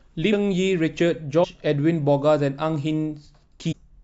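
At 0.32 s the speech jumps forward by about a fifth of a second. This is compressed frames skipped. Whole frames never reached playback, so the decoder resumed further on. The gap fits around ten frames of about 21.3 ms each. It happens again at 1.43 to 1.45 s, losing about 150 ms, and at 3.71 to 3.73 s, losing about 300 ms.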